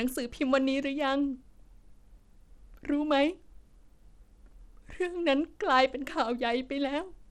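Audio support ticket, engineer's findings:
Treble dull and unstable across the whole speech clip, flickering in and out, with gritty noise and aliasing riding on the voice. Damage plainly audible start to end.

Probable component: Bluetooth link, likely Bluetooth SBC compression at a low bit pool, consistent with roughly 96 kbps. Mechanism: upper sub-bands starved of bits, remaining bands coarsely quantised.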